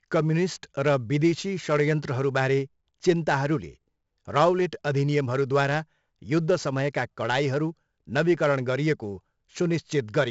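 From start to finish, the speech carries heavy 4-bit ADPCM compression. Each sample is coded as a small step from a predicted value, and the step size adapts as it goes. The coding error rides on the signal as broadband noise. Loud syllables get a gritty hiss that rises and falls with them. Sharp onsets distort where the step cannot grow fast enough. Nothing is heard above 7.7 kHz, which dulls the top end. This fits a 64 kbps stream.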